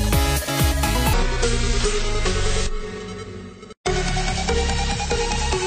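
At about 1.13 s the audio drops into a section at the wrong speed, and it stays there right to the end. From that point it runs at roughly 0.57 times its proper rate, so everything slows down and sinks by around ten semitones at the same time, turning heavy, dragged out and murky. Since pitch and timing shift together, the likely cause is that stretch being played back against the wrong clock.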